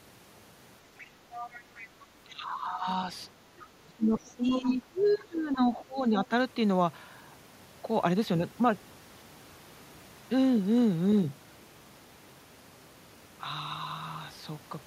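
A faint second voice breaks in at 0.98 to 1.1 s and more audibly from 1.32 to 2.02 s. This is the other side's voice leaking through, likely loudspeaker echo that the echo canceller left in the microphone signal. From 2.25 to 2.87 s the talker's own speech sinks by up to about 15 dB. This is speech suppressed in double talk, likely because the canceller ducked both voices while both sides were talking at once. Another brief scrap of leakage follows at 3.6 to 3.66 s. From 3.87 to 6.32 s the talker is pushed down again for roughly two seconds in total, dipping by as much as about 20 dB, which is the same double-talk suppression. Inside that stretch, remote scraps come through at 4.23 to 4.31 s (barely audible), 4.5 to 4.61 s (fairly prominent) and 5.0 to 5.1 s (very faint).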